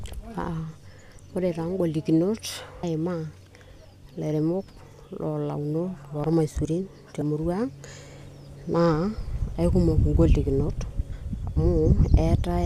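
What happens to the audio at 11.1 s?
Damaged data in a compressed stream hits the speech at 11.12 s, lasting only a few milliseconds. Some bytes of the encoded stream at that point were corrupted, so the decoder could not make sense of the affected frame. It lost its place in the bitstream and had to hunt for the next valid frame header before decoding could resume. The result is a very brief chirp or blip cutting across the speech.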